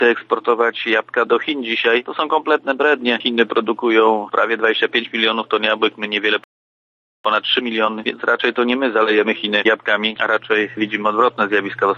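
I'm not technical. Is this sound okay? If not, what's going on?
No. At 6.44 s the sound stops dead and stays silent for about 0.81 s, until 7.25 s. This is a playback stall. The player likely ran short of data or got held up for a moment, so nothing came out until it recovered. Unlike a brief dropout, where a tiny piece is simply lost, this gap is long enough to notice clearly.

From 7.25 s to 10.25 s the sound then runs about 1.1 times faster than normal. This is time-compressed catch-up. The player is making up the time it lost by trimming tiny slices out and blending the edges together. What sets it apart from a recording simply played too fast is that the pitch stays normal. There is no chipmunk effect, just a hurried pace until 10.25 s.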